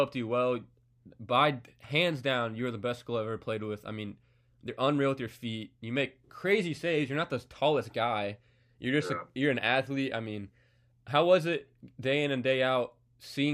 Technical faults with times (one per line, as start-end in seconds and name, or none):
none